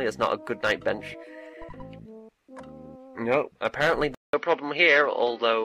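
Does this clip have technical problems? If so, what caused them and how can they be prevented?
Yes. At 4.1 s there's a 0.19 s gap, then the sound turns dull, with nothing above 6.1 kHz, a level shift of about 5 dB and new background noise. The input likely switched to a poorer device. Locking the input device before recording prevents it.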